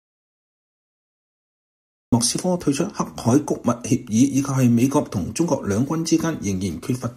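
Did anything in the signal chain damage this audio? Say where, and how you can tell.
Yes. There is an audio dropout to silence from the very start until 2.13 s. The opening is silent, with no room tone, and then the sound enters abruptly. The likely cause is a lost input link, such as a disconnected device or a stray mute, while the recorder kept writing zeros.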